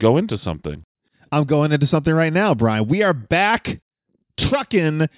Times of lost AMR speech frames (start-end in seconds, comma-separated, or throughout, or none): none